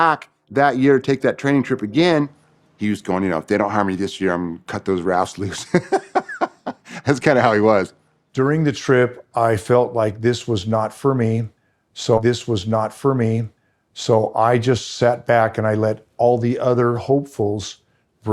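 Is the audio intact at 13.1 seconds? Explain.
No. At 13.1 seconds the speech is replaying: from 12.17 to 14.17 s a two-second stretch plays a second time, with a small blip at the jump back, before "I just sat back". This is a stream segment repeated, where the player fetched or queued the same chunk twice.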